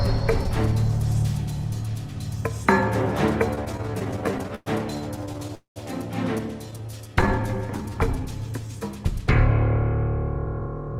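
From 3.55 to 4.68 s there's repeated stalling, a stutter: packets kept turning up late, so the jitter buffer kept running dry and the receiver stretched the last sound to cover about 278 ms, the longest hold around 110 ms. It drags and hiccups without losing anything. A shorter burst follows at 5.16 to 5.51 s, with tiny holds of no more than 10 ms.

Right after, from 5.55 to 5.78 s, comes a call audio freeze, likely from packets held up in transit. The last sound is carried on and fades, with about 130 ms of it going silent. Then the audio resumes where it left off, so 210 ms of delay has been added.

Between 6.66 and 8.74 s a jitter buffer slow-down kicks in. The receiver repeats single pitch periods to rebuild its reserve, adding 235 ms. Playback runs at 89% speed at the same pitch and sounds drawn out. More small stutter stalls sit inside it at 6.71 to 7.29 s.

Finally, from 10.36 to 10.97 s there's a jitter buffer speed-up. 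The buffer holds too much audio, so the receiver snips out short pitch-period chunks, around 70 ms in total. That pushes playback to 112% speed and gives it a rushed feel.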